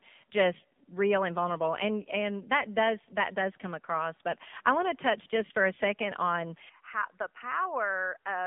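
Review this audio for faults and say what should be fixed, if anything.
AMR narrowband mobile codec, throughout the speech: everything above 3.7 kHz is gone, and the band sits roughly between 150 Hz and 3.6 kHz, so sibilants and breath lose their edge. The codec rebuilds the voice from a vocal-tract model excited by a few pulses per subframe. At this low rate, which fits the 7.4 kbps mode, the damage is plainly audible as a buzzy, synthetic quality. To prevent it, capture or route the speech through a wideband path instead of a narrowband mobile call leg.

Input switched to a poorer device, from 6.69 s to the end: the sound abruptly turns duller and boxier, with nothing above 3 kHz. Level drops by about 5 dB, and a faint new noise floor appears well below the speech. There is no gap at the switch. The likely cause is the system changing its input mid-recording to another microphone or a headset's call profile, which has a narrower band and its own tone and noise. 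To prevent it, lock the input device for the whole session and disable automatic switching.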